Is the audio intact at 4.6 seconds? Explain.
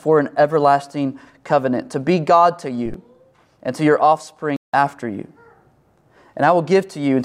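No. From 4.56 to 4.74 s there is a corrupt frame muted fault. Damaged compressed frames were rejected by the decoder and replaced with silence, leaving an abrupt 0.17 s hole that fits two lost frames. The waveform drops to a flat line, and the spectrogram shows a blank vertical band with sharp edges.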